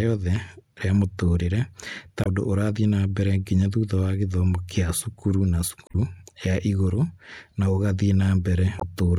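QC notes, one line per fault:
2.21–2.27 s, 5.86–5.95 s, 8.78–8.83 s: damaged data in a compressed stream. Brief glitches between "rĩa mũtũũrĩre ta" and "ũndũ ũrathiĩ na mbere", between "gĩthomo kĩa cukuru na" and "ya igũrũ na", and near the end. Corrupt bytes garble the frames there, and the decoder loses sync until the next frame header.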